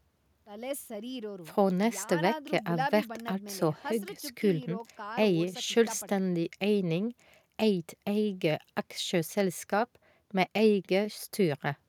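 No technical faults can be heard anywhere in the speech recording, and the signal stays steady and continuous throughout.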